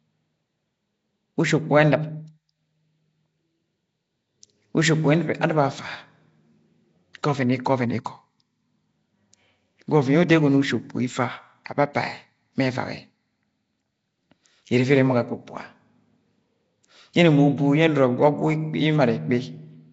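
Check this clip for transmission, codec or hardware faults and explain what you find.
Two faults are audible: a codec coloration across the whole speech clip and one brief pre-echo.

Nellymoser compression, throughout: the speech has a rough, hissy halo and a smeared, underwater quality, with nothing above 7.7 kHz. The likely cause is the old Flash microphone codec, Nellymoser Asao, which codes short blocks of samples on a tight, fixed bit budget, consistent with roughly 32 kbps. Bands too weak to earn bits are replaced with noise. The damage is plainly audible.

Pre-echo at 8.05 s: a short hiss of about 14 ms runs just ahead of a sharp attack, and the onset sounds softened. A transform codec spreads its quantisation noise across an entire block. When a loud transient lands late in that block, noise sized for the loud part also fills the quiet stretch before it, so the hiss arrives before the sound that caused it.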